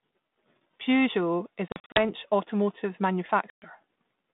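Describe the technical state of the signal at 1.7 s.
At 1.7 s you're right inside a burst of packet loss on an ADPCM call, running from about 1.68 to 1.99 s. Roughly ten packets go missing, around 180 ms of audio scattered over 280 ms, the longest single gap about 40 ms. Each hole is filled with hard-edged silence, and because the decoder's adaptive predictor and step size lose sync with the sender's, the sound comes back slightly distorted before settling over some tens of milliseconds.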